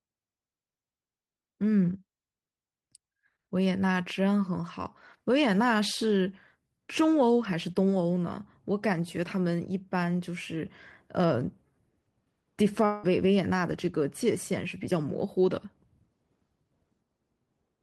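A speech clip with one long network dropout from 12.85 to 13.05 s: about 0.18 s of sound is lost and replaced by a fading buzzy continuation, likely packet loss, appearing on a spectrogram as smeared, decaying harmonics.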